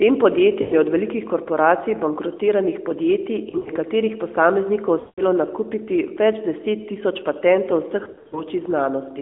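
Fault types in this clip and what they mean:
Lost AMR speech frames: corrupted frames are patched by replaying the last pitch and filter settings at falling gain, heard as four smeared, fading dips.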